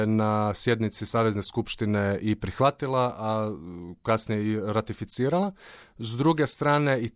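Nothing here calls for a note, as the speech runs along without any technical trouble to point at.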